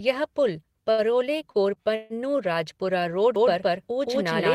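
The clip is speech, and it has three kinds of fault. The first is a short stall from a late packet, at 0.91 to 1.01 s and again at 1.51 to 1.57 s. Each time a packet came in after it was due, so the jitter buffer ran dry. The receiver held the last sound to bridge the wait, 68 ms the first time and 31 ms the second. Nothing is lost. The speech simply hangs for a moment, then carries on from the same point, now running that much later.

A longer call audio freeze follows at 1.95 to 2.13 s. The sound is held and drawn out for 146 ms. It never drops to silence. Then the speech resumes exactly where it stopped, with nothing cut. This is likely packets held up in the network until the jitter buffer emptied, leaving the receiver to extend the last sound until they arrived. The pause adds another 146 ms of delay.

From 3.36 s to the end there is a doubled audio track. A second full-band copy of the speech starts abruptly and trails the original by roughly 200 ms. 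It is about as loud as the original. It has no room colour and does not decay like an echo. The likely cause is the same audio being captured again through a slower path and mixed back in.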